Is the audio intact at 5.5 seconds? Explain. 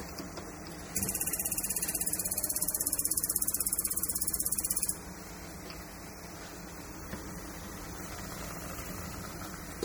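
No. At 5.5 seconds, as across the whole clip, the sound shows plainly audible damage, likely from MP3 compression at a rate that fits about 48 kbps. Starved of bits, the encoder chops the treble off and drops weak frequency lines that blink on and off between frames, giving a watery, swirling texture with smeared attacks. A spectrogram shows a flat ceiling where the highs stop and scattered holes flickering below it.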